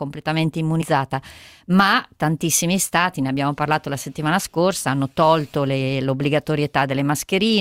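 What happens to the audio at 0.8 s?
The speech jumps forward between 0.81 and 0.88 s: around a tenth of a second of audio never plays, and the sound resumes later than it should, with a brief disturbance at the join. This is compressed frames skipped. About five whole frames, a size that fits 20 ms codec frames, were either missing from the stream or rejected by the decoder as damaged. Playback then continues from the next good frame, so the gap is lost rather than replaced.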